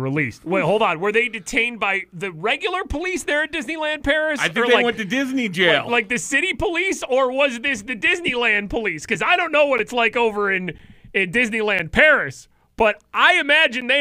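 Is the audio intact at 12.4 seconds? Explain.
No, 12.4 seconds falls within a stretch of periodic USB or driver dropouts running from 9.78 to 13.82 s. Once a second, something blocks the USB bus or audio driver, so the audio path loses around 10 ms of signal, and each gap is filled with silence. About five of these losses occur across the span, heard as evenly spaced ticks or pops that cut into the sound at a steady one-second rate.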